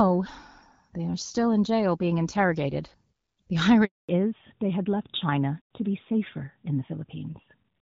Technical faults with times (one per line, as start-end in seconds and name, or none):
3.85-4.09 handover gap
4.09-7.88 fallback to narrowband